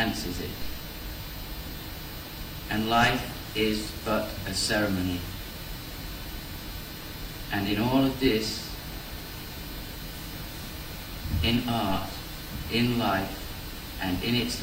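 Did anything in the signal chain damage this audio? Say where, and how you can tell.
Yes. There is a DC step at 0.62 s, and it most plausibly arises at the converter or analogue input stage. The waveform's zero line jumps abruptly by about -26 dBFS. You hear it as a single low thump or click, while the sound itself carries on unchanged. The offset does not hold. It drains away slowly, in the way a DC-blocking high-pass near 2 Hz would pull it back. That gradual slope after a sharp jump is the signature of a DC step passing through a high-pass.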